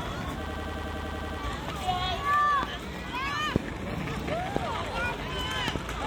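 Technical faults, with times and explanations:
0.46–1.39 s, system hang loop: the same 93 ms slice of sound repeats exactly, ten times in a row, at about 10.8 Hz, which fits a 4096-sample ring buffer. The system stalled while the audio hardware kept replaying that buffer. At this loop length it sounds like a machine-gun stutter rather than a buzz. Unlike a dropout or glitch, each repeat is identical, and the sound picks up again with essentially nothing missing.
2.63–2.65 s, 3.56–3.58 s, 4.56–4.59 s and 5.68–5.78 s, loud pop: sharp thumps roughly 20 dB above the surrounding sound. The last event is a double pop. Each is most likely a voltage step or pulse, from a connector, switch, static or driver glitch, added to the signal and shaped by the following circuitry. Unlike a dropout or the loop above, the sound carries on unbroken underneath each pop.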